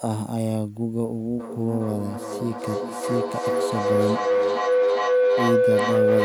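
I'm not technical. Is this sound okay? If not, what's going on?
No, it isn't. From about 1.4 seconds right to the end, there's feedback howl. Two devices in the same room are probably on the same call, so the speaker's sound keeps getting picked up by a microphone and played back a little louder each time round. It narrows into a steady hum around 500 Hz, pulsing roughly every 0.4 seconds, and ends up louder than the speech. Muting one device stops it.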